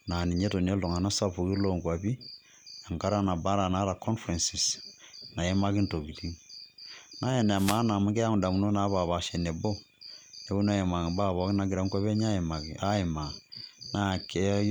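A wireless microphone noise hit sounds from 7.55 to 7.81 s in this speech recording, a quarter-second burst of static just before "amu keyau ndamunot napaapaasha". The FM radio link faded as reflected signals cancelled, so receiver noise surged.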